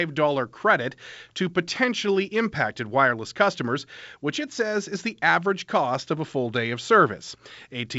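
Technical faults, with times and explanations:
No technical faults can be heard in the clip.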